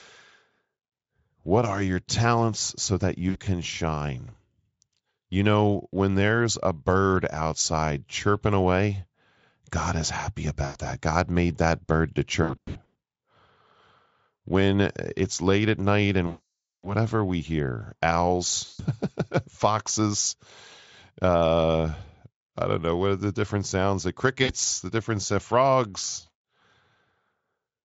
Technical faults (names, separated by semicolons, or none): VoIP packet loss concealed by the speech codec